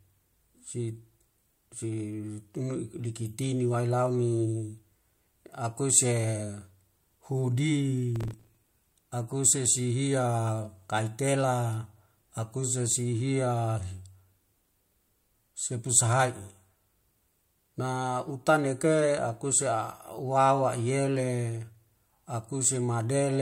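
From 8.16 to 8.92 s a gritty crackle tears across the speech: processor overload crackle, with around thirty short buffers of about 5 ms missed and stale audio replayed.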